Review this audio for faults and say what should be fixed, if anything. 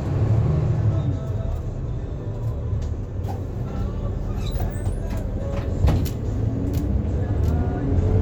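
Nothing here needs fixing, since no technical faults turn up anywhere in these sounds.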